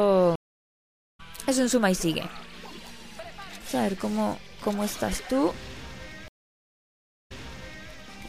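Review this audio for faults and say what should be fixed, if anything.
Two stream reconnects, at 0.36–1.20 s and 6.28–7.90 s: the connection dropped, the player restarted its decoder after 0.83 s and 1.02 s of silence, resuming roughly 0.7 s later and then 0.6 s earlier. Larger client buffering with seamless resume-from-offset would prevent this.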